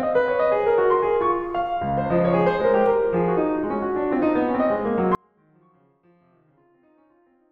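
At 5.15 s the music cuts abruptly to a faint residue of itself, roughly 40 dB down, and stays that way to the end: an audio dropout, likely a lost feed with the path still live. The waveform collapses to a thin trace; the spectrogram dims suddenly.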